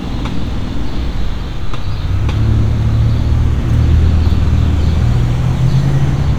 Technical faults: none

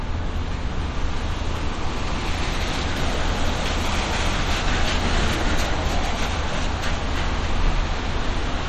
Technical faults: MP3 compression

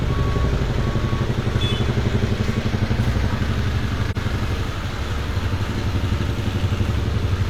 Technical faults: AAC frame loss with muting

